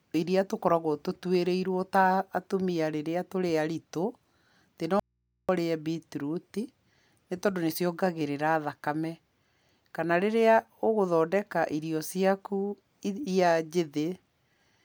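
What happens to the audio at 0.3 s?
Nothing goes wrong at 0.3 s; the speech continues intact through that moment with no dropout, click or distortion.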